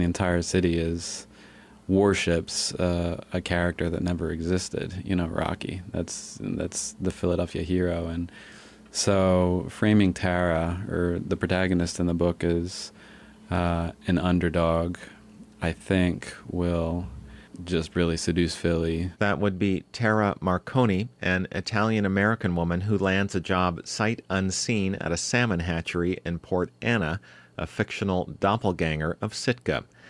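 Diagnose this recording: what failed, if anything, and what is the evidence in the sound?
Nothing failed; no fault is audible anywhere here.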